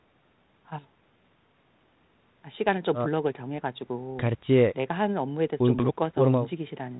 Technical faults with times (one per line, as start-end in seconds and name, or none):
none